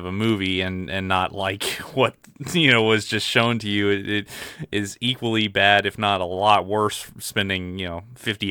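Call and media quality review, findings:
No findings in this call and media quality review; nothing in the speech needs a ticket.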